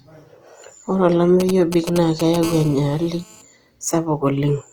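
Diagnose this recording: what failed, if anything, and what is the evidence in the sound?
Codec stage: the speech has a grainy, rough texture throughout, with bands filled by noise rather than left empty, which points to Opus compression in its CELT music mode, likely at a rate around 24 kbps. A spectrogram shows fullband content reaching about 20.4 kHz, textured with noisy, smeared harmonics.

Analogue wiring: from 1.40 s to 2.44 s, a galloping dit-dit-dit pattern of short buzzes marks GSM signalling bursts, roughly 10 dB below the speech. A nearby 2G phone's radio bursts are rectified in the audio circuit. A spectrogram shows intermittent vertical clusters with harmonics spaced at 217 Hz.

Analogue wiring again: from 2.44 s to 3.42 s, the pattern becomes a steady, raspy GSM phone buzz at about 20 dB below the speech. The phone is now transmitting continuously at 217 bursts per second, and the circuit demodulates each burst. 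The waveform shows a regular pulse train, and the spectrogram shows continuous horizontal lines at multiples of 217 Hz.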